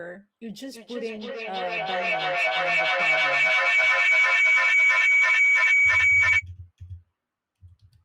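From 0.64 s to 6.47 s a feedback howl takes over the speech: a microphone is picking up a loudspeaker on the same call, and each pass around the loop returns louder. The tone narrows to around 2 kHz and throbs roughly every 300 ms, peaking about 15 dB above the speech. A spectrogram shows a bright horizontal band near 2 kHz, beaded at that rhythm, while the waveform swells into a dense block that drowns the speech.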